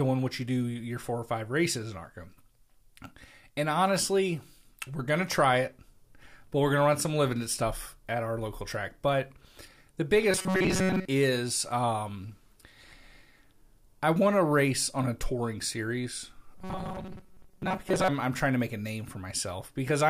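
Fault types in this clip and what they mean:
Robotic sound from repeated short buffers, 10.31–11.05 s and 16.55–18.09 s: the speech becomes a rigid metallic buzz locked at 188 Hz, likely from late audio being covered by looping the last few milliseconds. That fits a 5.3 ms buffer, with most real audio skipped.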